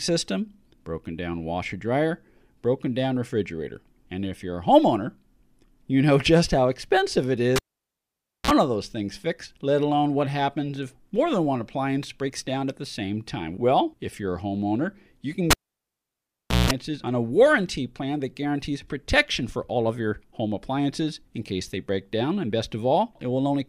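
A live cable was pulled and plugged in twice: at 7.56 s, after "just how expensive it", a pop opens 0.9 s of near silence, then a 42 ms burst of 60 Hz mains buzz and another pop before "of those things fixed"; at 15.51 s, after "a homeowner you can", the gap lasts 1.15 s with 180 ms of buzz, returning at 16.71 s on "on a warranty plan".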